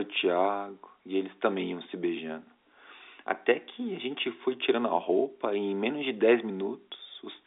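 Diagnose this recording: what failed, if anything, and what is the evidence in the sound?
Nothing failed; every stage behaves as expected.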